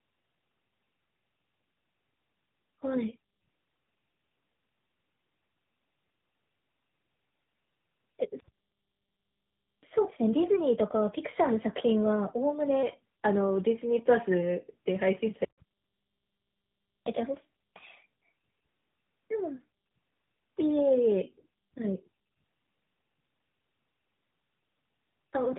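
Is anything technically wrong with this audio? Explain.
Yes, two faults are audible in this speech clip.

Tandem speech coding runs through the whole recording. The speech passed through two low-rate speech codecs in a row, GSM full rate at 13 kbit/s and then AMR-NB at 12.2 kbit/s, with a G.711 mu-law link between them. Each coder had to model a signal the previous one had already damaged, so the errors stack. The result sounds rough, muffled and warbly. On a spectrogram there is a hard ceiling with nothing above 3.8 kHz, and the formant bands look smeared and blotchy.

Catch-up at higher speed runs from 9.83 to 12.83 s. After a stall, the player drained its backlog by resampling at 1.1 times normal speed. Because resampling changes speed and pitch together, the speech gets quicker and rises by about a semitone and a half for those three seconds, then drops back to normal. On a spectrogram the harmonic stack steps upward and the syllables bunch closer together. 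The waveform shows the same compression in time.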